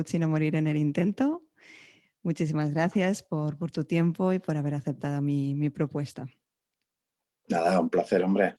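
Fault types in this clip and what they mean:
No faults are audible anywhere in this clip.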